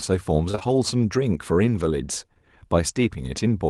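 From 0.51 s to 0.63 s, three consecutive 20 ms gaps of short concealed packet loss were patched by extrapolating the preceding sound, leaving a brief smeared wobble in the speech.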